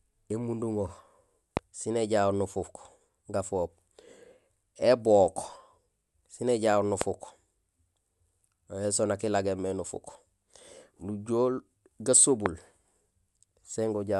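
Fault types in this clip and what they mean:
Loud pop: three single sharp pops, roughly 20 dB above the speech, at 1.57 s (just before "sin éjahoor"), 7.01 s and 12.46 s, likely from a sudden voltage step or pulse added to the signal.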